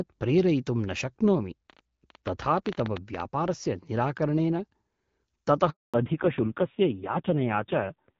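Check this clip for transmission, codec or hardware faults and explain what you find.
Three faults turn up here: a burst of clicks early on, a short dropout later, and a drop in bandwidth that lasts to the end.

From 1.70 to 3.21 s there's a train of clicks, around twenty of them at roughly 11.3 per second and unevenly spaced, peaking maybe 10 dB above the speech. They tick over everything, pauses included. The likely cause is a pulse from nearby interference or a struggling interface.

At 5.70 s a handover gap cuts in. The speech fades out fast and stays silent for 240 ms until 5.94 s. That's the call switching networks with no speech frames getting through during the move, so whatever was said there is gone.

Right after, at 5.94 s, comes a fallback to narrowband that holds to the end. Before this point the clear HD Voice sound fits AMR-WB at 12.65 kbit/s. After it, nothing is left above 4 kHz and the voice gets duller and rougher, which fits AMR-NB at around 5.9 kbit/s.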